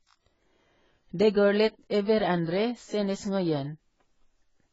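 From start to finish the speech is dull and smeared, with nothing above 7.6 kHz and a fizzy, warbling texture on sibilants and held sounds. This is likely AAC compression with heavy damage, consistent with AAC-LC at a very low bitrate of about 16 kbps.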